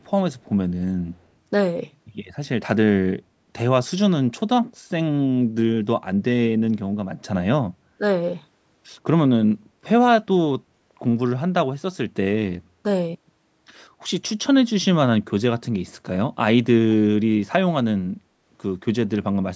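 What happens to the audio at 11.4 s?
Nothing goes wrong at 11.4 s; the speech carries on intact through that moment, with only the ordinary call microphone processing in the path, which removes the deepest bass and leaves nothing above 8 kHz.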